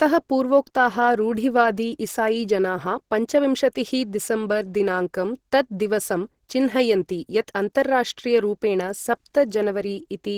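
From start to finish the speech carries plainly audible Opus compression damage, likely from encoding at a low rate in the codec's hybrid mode, which fits a bitrate around 16 kbps. Hybrid coding handles the lower band as speech and fills the upper bands with coarse energy, so the voice sounds muffled and hoarse, with a grainy, noisy sheen. On a spectrogram, energy reaches about 20.3 kHz but the upper region looks smeared and noise-like, without clear harmonic detail.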